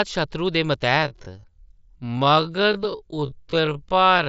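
Speech that suddenly drops to about half pace at 0.97 s and stays there to the end, dragging while the pitch holds steady. That points to a time-stretched section, likely software lengthening the audio by repeating short pieces. A plain slowdown would lower the pitch too. Band-limiting near 8 kHz comes from the mSBC headset link.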